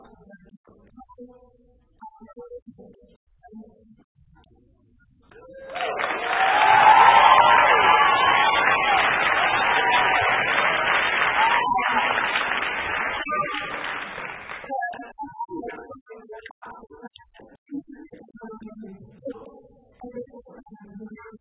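No dropouts, clicks, distortion or other technical faults can be heard anywhere in the recording.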